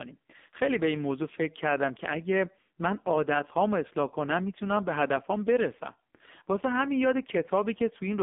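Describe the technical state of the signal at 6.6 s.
At 6.6 s, as throughout, the speech has gone through the AMR narrowband mobile codec, whose narrowband line filtering confines it to 200 Hz–3.6 kHz and whose vocal-tract model at a low bitrate (consistent with about 5.9 kbps) makes it sound buzzy and synthetic.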